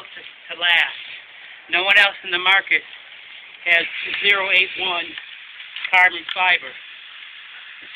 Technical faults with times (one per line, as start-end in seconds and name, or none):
none